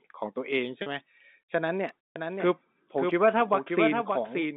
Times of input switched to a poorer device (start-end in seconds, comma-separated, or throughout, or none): none